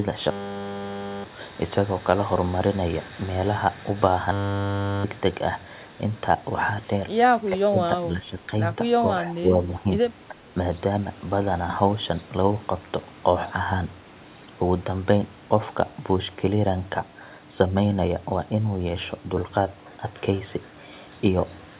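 A speech clip where the echo canceller likely could not tell the talker from loudspeaker echo during double talk and turned both down, causing speech suppressed in double talk. The voice dips by about 5 to 15 dB at 7.49–7.79, 8.01–8.51, 8.99–9.09, 9.34–9.56, 9.80–9.86 and 10.29–10.40 s. Through the narrowband call path, which fits G.711, nothing is heard above 4 kHz.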